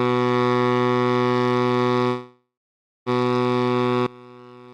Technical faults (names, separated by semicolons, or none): call audio freeze; one channel inverted